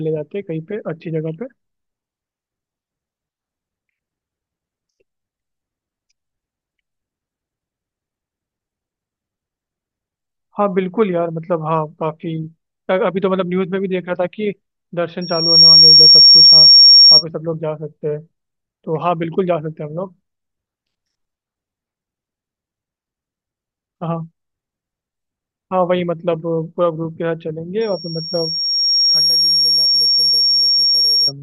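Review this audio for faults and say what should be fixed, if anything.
Loudspeaker feedback squeal at 15.21 to 17.24 s and 27.81 to 31.32 s. A 5.5 kHz tone swells through the mic-speaker loop. The first squeal is much louder than the speech. To prevent it, cut 5.5 kHz and move the microphone away from the loudspeaker.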